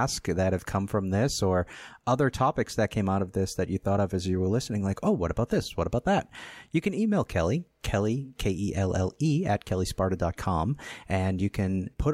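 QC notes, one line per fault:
No faults found.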